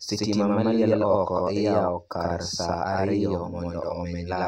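One channel runs late by a long buffer, about 92.9 ms, which fits a 4096-sample buffer, and the two channels are then summed to mono. This channel delay doubling runs throughout the speech, each syllable followed by an equally loud slap echo.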